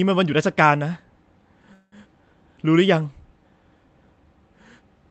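Packets were most likely held up so the jitter buffer ran dry, causing a call audio freeze from 1.73 to 1.94 s: the last sound stretches into a fading buzz, then speech resumes with nothing lost.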